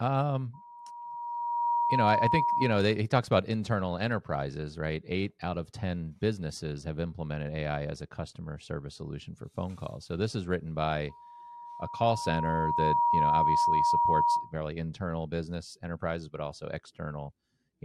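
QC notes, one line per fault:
0.53–2.98 s: loudspeaker feedback squeal. A steady 952 Hz tone rises out of the speech over roughly a second and holds at about 5 dB above it, ending before "talks about internal enterprises"; the microphone is hearing its own loudspeaker, and at this frequency the loop gain exceeds one.
11.09–14.54 s: loudspeaker feedback squeal. After "this is written" the same 952 Hz tone swells more slowly, over about two seconds, to about 5 dB over the speech and clears before "internal business enterprises but"; the same mic–speaker loop is again regenerating at that frequency.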